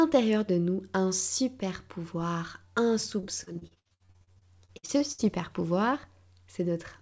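Repeated packet loss (robotic sound) runs from 3.20 to 5.21 s, heard through a call path that carries nothing above 8 kHz. Packets went missing about 20 times in that stretch, with the longest gap at 61 ms. Each hole was patched by stretching the preceding sound, so about 35 percent of the span is concealed rather than real. The speech turns choppy, with fragments dropping out in quick succession.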